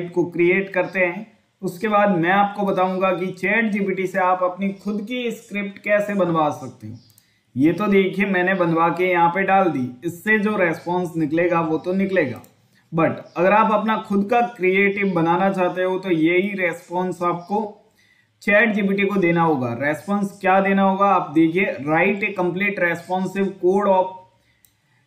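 No technical faults can be heard anywhere in this audio.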